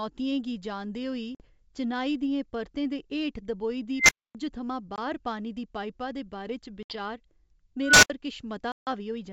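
At 1.35 s, just after "गी जानदे होई", the speech drops into a hard-edged 50 ms hole, a packet loss on an ADPCM call that fits a handful of lost packets. The decoder's predictor and step size no longer match the sender's, so "चिनाई दियें परतें दे" comes back slightly distorted. On the waveform it is a flat gap with sheer edges. In a spectrogram it is a vertical blank band.

From 3.97 s, after "दे हेठ दबोई दी", an unstable filter takes over. A recursive filter with bad coefficients lets a tone near 2 kHz swell over about 117 ms into a loud squeal. It clips and then cuts to 260 ms of silence. The waveform shows an exponential envelope flattening as it clips, then nothing. The spectrogram shows a single bright horizontal line that stops abruptly.

The same loss recurs as a 20 ms hole at 4.96 s, just before "पानी दी पाइपा दे". A 70 ms hole follows at 6.83 s.

At 7.82 s a second unstable-filter tone, around 1.5 kHz, builds over about 207 ms and is followed by 70 ms of silence.

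The longest gap, 150 ms, opens at 8.72 s. It points to something like fifteen packets lost, and a mistracked, slightly distorted restart follows.

The G.722 wideband coding at 64 kbit/s keeps speech clear up to about 7 kHz, with only a light hiss in its upper band, around these events.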